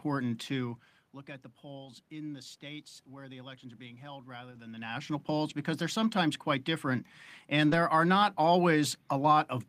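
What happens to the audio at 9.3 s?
Nothing goes wrong at 9.3 s: the audio is intact over the room's background noise, with no dropout, glitch or distortion at that point.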